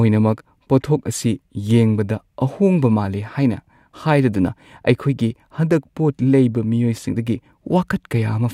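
At 7.13 s, damaged data in the compressed stream corrupts part of a frame, so the decoder misreads it, loses sync and hunts for the next valid frame header. The speech is interrupted by a brief glitch lasting only about 14 ms.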